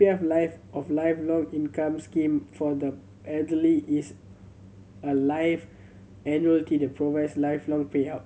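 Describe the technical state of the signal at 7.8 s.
At 7.8 s the speech signal is intact, with no fault audible at that moment.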